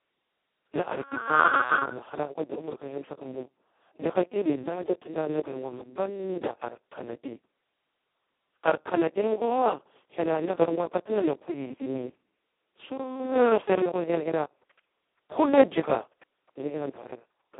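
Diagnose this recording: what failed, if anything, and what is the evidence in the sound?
The codec stage failed: the speech went through Speex at its lowest quality, with almost no bits for the excitation, which fits a bitrate near 2 kbps. Throughout, the speech sounds hoarse, buzzy and robotic, confined to roughly 250 Hz to 3.6 kHz, with nothing above 3.9 kHz.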